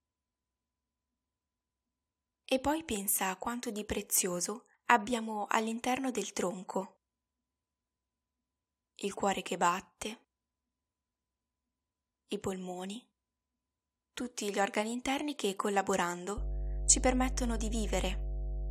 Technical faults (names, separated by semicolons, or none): mains hum